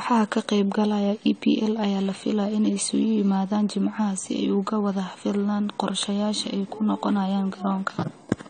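From start to finish the speech sounds dull and smeared, and the damage is plainly audible. Nothing reaches above 9 kHz, so the top end is simply gone. That's likely AAC compression: an AAC-LC encoder short on bits quantises the spectrum coarsely against its hearing model and drops the cut-off to save data. The sound points to a low bitrate of around 32 kbps, which is where this kind of dulling and smearing becomes obvious.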